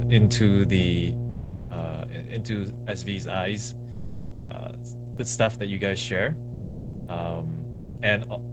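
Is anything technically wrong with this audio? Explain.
Yes. There are three faults.

Mains hum runs through the whole clip. It is a steady 60 Hz tone with low harmonics. A ground loop or nearby transformer has leaked the power line into the signal. The hum is strong, only a little below the speech.

Automatic gain falling happens from 0.05 to 2.33 s. The gain control judged the input too loud, or its background noise too strong, and turned itself down. The level drops by about 13 dB over those two seconds. The speech and its background sink together.

Sound dropped by the voice detector happens four times: 1.31 to 1.67 s, 3.91 to 4.47 s, 6.55 to 7.07 s, and 7.71 to 7.95 s. Each gap lasts between 240 and 560 ms. Speech gives way to steady comfort noise or near silence, then returns. The likely cause is Opus discontinuous transmission. The sender took real sound for background and stopped sending.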